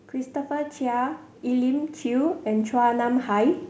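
Automatic gain rising runs from 0.12 to 3.62 s in this speech clip: the gain control, judging the input too quiet, lifts level by about 7 dB, swelling voice and background together. The call path leaves nothing above 8 kHz, which fits a wideband codec such as G.722 at 64 kbps.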